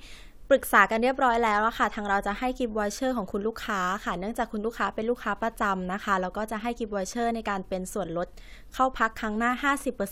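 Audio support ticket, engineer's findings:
No faults found in clip.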